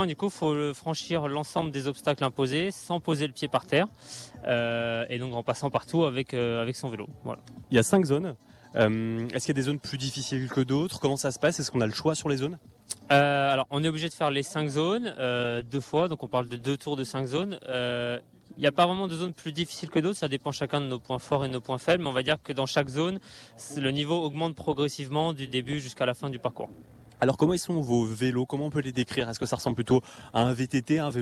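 From 15.45 to 17.68 s a call bitrate drop coarsens the audio, worst for 1.17 s, which fits the encoder falling from 48 to 18 kbps.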